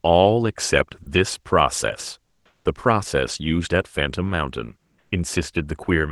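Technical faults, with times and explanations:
1.03 to 1.06 s: sound dropped by the voice detector. About 30 ms of speech vanishes and is replaced by steady noise or near silence. The cause is likely Opus discontinuous transmission, whose voice detector mistook this stretch for background and briefly stopped sending audio.
2.25 to 2.65 s and 4.78 to 5.11 s: comfort noise in place of the background. The real background, sitting about 44 dB and 51 dB below the loudest speech, turns into flat, featureless hiss. It drops by about 7 dB in the first gap and about 2 dB in the second. The likely cause is Opus discontinuous transmission, where the receiver synthesises noise during pauses.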